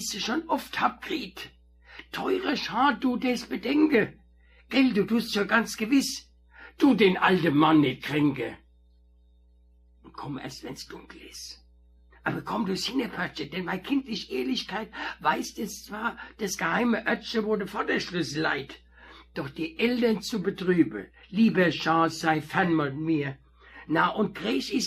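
A steady low drone sits under the audio from start to finish, a mains hum at 60 Hz, around 30 dB below the signal. A ground loop or a nearby transformer has let the power line leak into the signal path.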